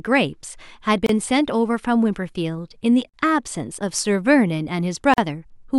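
Speech with a gap at a join of encoded pieces every 2 s: at 1.06 s (29 ms), 3.09 s and 5.14 s (43 ms each). Untrimmed encoder delay and end padding leave short silent dropouts with smeared edges, shown as full-height vertical stripes on a spectrogram.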